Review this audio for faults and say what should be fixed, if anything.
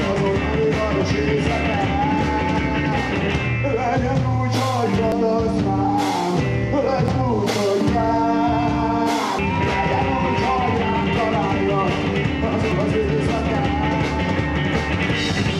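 Four abrupt skips, each a small jump forward in the sound, occur at 5.12, 7.08, 9.39 and 12.72 s. Nothing goes quiet; the audio on either side is spliced straight together, with roughly 100 to 150 ms missing at each join. The likely cause is a dropped buffer (overrun): the recording software fell behind, the hardware overwrote captured audio before it was read, and those stretches were lost. To prevent it, use larger capture buffers and give the recording thread higher priority so it keeps up with the device.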